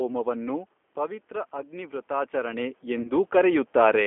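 Throughout, the speech has passed through a G.729 codec at 8 kbit/s, which rebuilds each frame from a vocal tract filter, a pitch predictor and a few pulses. The line band runs from 250 Hz to 3.4 kHz, so the sound is thin, with plainly audible roughness and a synthetic edge.

From 0.95 s to 4.02 s, the automatic gain rising acts after the input level drops by about 9 dB. The control compensates by raising its gain gradually by about 7 dB, so voice and room noise swell together over those three seconds. The talker moving near 0.5 s and 2.0 s also shifts the level.

At 3.02 s to 3.11 s, VoIP packet loss concealed by the speech codec occurs. About 30 ms went missing, which fits a single lost packet. The decoder extended its last pitch and filter, so the speech smears into a fading buzzy tone or coloured noise and stays weakened briefly afterward.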